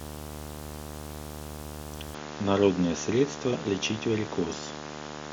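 Video or display buzz runs throughout: a screen or video cable couples into the audio, leaving a 75 Hz field-rate buzz with hash, roughly 10 dB below the speech. Input switched to a poorer device at 2.15 s, likely to another microphone or a headset profile: from there to the end, nothing passes above 7.1 kHz, so the speech turns dull, with no gap and a faint new noise floor.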